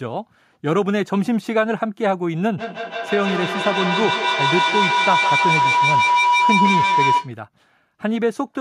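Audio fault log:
2.58 to 7.36 s, feedback howl. A tone near 1 kHz rises out of the speech and keeps growing instead of dying away. At its loudest it sits about 2 dB above the speech. It pulses roughly every 150 ms. That pulse is the trip time of a loop from a microphone into a loudspeaker in the same room and back again. Each pass adds level, so the loop narrows onto the frequency it favours. The howl holds until the loop is broken at 7.36 s.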